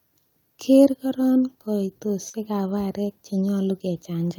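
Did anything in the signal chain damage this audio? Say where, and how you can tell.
Yes. At the network stage there is a short concealed packet loss between about 2.29 and 2.35 s. Roughly 40 ms of speech arrived too late or not at all, and the decoder covered about 38 ms of it by extending the preceding sound and then blending back into the real signal. It is heard as a brief smear or wobble.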